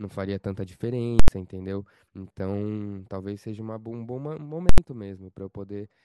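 At 1.20 to 1.28 s and 4.69 to 4.78 s, invalid numbers at full scale pin the speech at one extreme value for an 85 ms block, which fits 4096 samples. Unlike clipping, nothing sounds between the loud edge pops.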